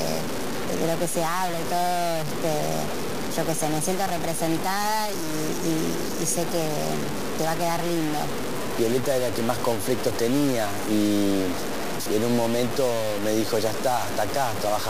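Throughout, grainy distortion that tracks the sound points likely to low bit depth without dither: 4-bit truncation leaving error only about 10 dB down.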